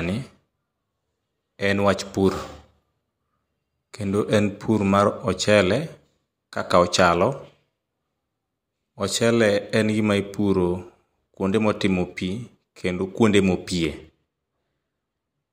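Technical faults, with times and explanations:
13.87–15.53 s, channel delay (comb filtering): right after "kendo kuonde" the top end goes a bit dull to the end of the clip. One channel is trailing the other by roughly a single sample, a few hundredths of a millisecond, and when the two get summed to mono the shared content cancels at evenly spaced points. With such a tiny offset the first notch lands up around 20 kHz, so you hear a soft loss of air and sparkle rather than an obvious phasey hollowness.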